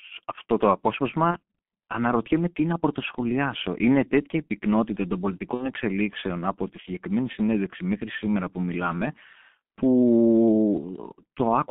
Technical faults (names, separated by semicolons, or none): G.723.1 codec; VoIP packet loss concealed by the speech codec